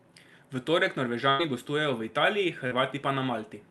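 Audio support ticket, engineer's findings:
Burst of packet loss, 1.29 to 1.41 s, ending just before "gostujejo v". Roughly 0.1 s of speech missing; jitter buffer concealment extends the last sound as a held buzz or hiss that fades out. Speech resumes further along, with that stretch gone. Probable component: network path into the jitter buffer, several consecutive packets dropped or late.

Short concealed packet loss, 2.67 to 2.73 s. Brief smear or wobble of about 40 ms; the decoder fills the gap by continuing the preceding pitch or noise, then crossfades back to real audio. A short consonant may be lost. Probable component: one or two packets arriving too late for the jitter buffer. Call path audible as Opus-style coding with top end near 12 kHz.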